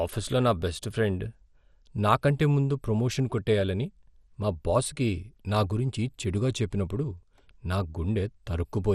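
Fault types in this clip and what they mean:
MP2 compression: the speech sounds dull and gurgling, with granular distortion and nothing above 13.6 kHz, likely from low-rate Layer II coding; the distortion separates it from plain filtering.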